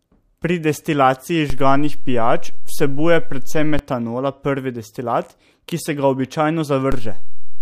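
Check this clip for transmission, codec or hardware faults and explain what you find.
Two DC steps in this speech. At 1.5 s the waveform's zero line jumps by about -11 dBFS and returns at 3.79 s, giving a low thump at each edge. At 6.92 s it jumps again, by about -10 dBFS, and holds to the end.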